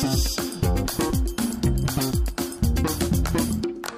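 A short stretch of audio with one bit error spike at 2.58 s: a single sharp tick, about -28 dBFS, lasting just two samples. It sounds like one flipped bit in memory or on a digital link, making the values jump and snap straight back, so the click has nothing to do with the surrounding sound.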